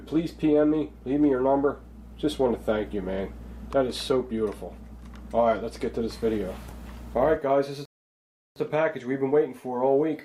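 A rebuffering stall occurs at 7.85 s. The audio drops to silence until 8.56 s, then resumes exactly where it stopped. Nothing is lost, but about 0.71 s is added while the player waits for data.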